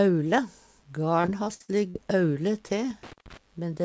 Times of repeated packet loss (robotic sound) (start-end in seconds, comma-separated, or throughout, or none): 1.22-1.96